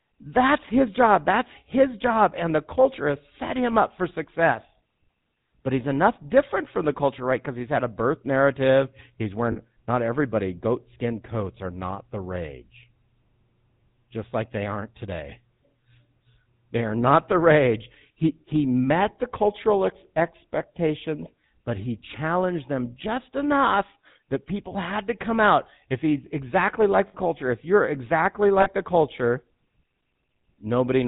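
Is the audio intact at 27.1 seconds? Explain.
No. Between 27.08 and 27.15 s, just after "he's exactly like" and before "culture if you're exactly", there are lost GSM frames. For about 60 ms, which fits three dropped 20 ms frames, the decoder reuses the last good frame's parameters, producing a brief rough, metallic ring.

The whole clip, including this moment, also carries the GSM full-rate codec at 13 kbps. Its pulse-driven vocal-tract model and 4 kHz bandwidth limit give the speech a plainly audible buzzy, gravelly roughness around the dropout.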